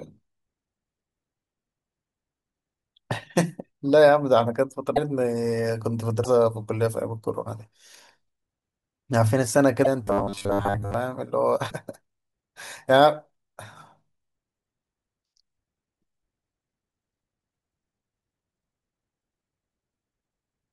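At 4.95, 6.23 and 9.84 s, and again at 11.69 s, the speech jumps forward with a brief chirp or noise burst lasting about one 26.1 ms frame. This is a broken MP3 bit reservoir, likely from dropped frames leaving the next frame reading another frame's bytes. Unlike a clean dropout, each cut also skips the audio ahead.

From 10.04 to 10.94 s the speech becomes a rigid, metallic buzz at 100 Hz that still roughly follows the speech. This is robotic sound from repeated short buffers, likely a 10 ms buffer replayed in place of most of the incoming audio. Unlike the single-frame reservoir glitches, it holds a fixed 100 Hz buzz for nearly a second.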